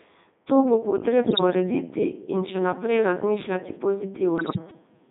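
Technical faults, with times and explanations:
Throughout, Codec 2 vocoder: the speech is rebuilt from pitch, voicing, energy and a spectral envelope, so it comes out buzzy and robotic and squeezed into roughly 200 Hz to 3.7 kHz. The damage is heavy, which fits even the 3.2 kbit/s top mode.
1.22–1.41 s and 4.38–4.58 s, bit errors on digital voice radio: each burst makes the synthetic voice jump in pitch, level and tone, breaking into warbly gibberish. The bursts point to around nine corrupted frames each, with roughly 4% errors in the first and about 10% in the second, which is harsher.
4.71 s, bit error spike: a single sharp tick that has nothing to do with the speech, heard as broadband energy. A flipped bit across a few samples makes the value jump by a power of two, and it snaps straight back.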